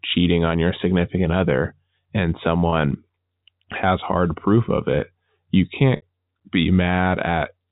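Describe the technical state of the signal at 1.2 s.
At 1.2 s the signal is intact, with no fault, just the expected G.711 telephone band that stops at 4 kHz.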